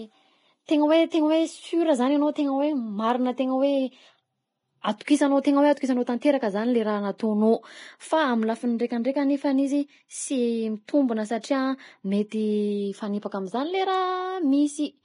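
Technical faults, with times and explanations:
Throughout, Vorbis compression: a low-bitrate encoding, likely around 27 kbps, discards everything above about 10.6 kHz and quantises the remaining treble so coarsely that fine detail turns into noise, so the speech sounds dull yet hissy and grainy, with roughened tones and smeared consonant attacks.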